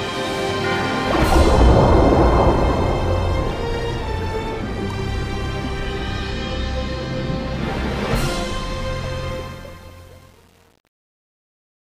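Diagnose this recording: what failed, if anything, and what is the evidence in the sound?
Truncation distortion on a fade, from sample-format conversion: the fade-out turns gritty from 9.29 s and is worst from 9.48 s to 11.99 s. The coarse steps fit an undithered 8-bit word; unlike codec artefacts, the grit worsens as the level falls.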